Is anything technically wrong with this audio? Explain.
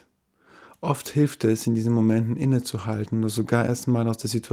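No, nothing technically wrong here.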